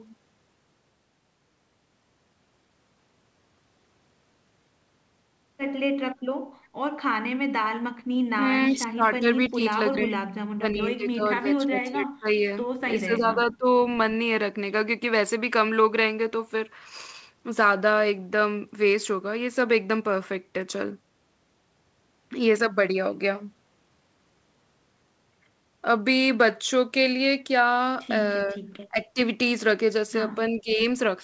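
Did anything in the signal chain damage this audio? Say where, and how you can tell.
Yes. Call processing did: from 8.7 to 12.44 s the speech drops in pieces by up to about 30 dB, again at 13.05–13.67 s, and briefly at 28.91–29.19 s and 30.5–30.79 s. That's likely speech suppressed in double talk, with the echo canceller ducking everything while both ends talked.

At 9.44 s there's a faint scrap of repeated sound, about 25 dB down, trailing the original by 336 ms. That's likely an echo leak, where loudspeaker pickup slipped past the far end's canceller and came back delayed.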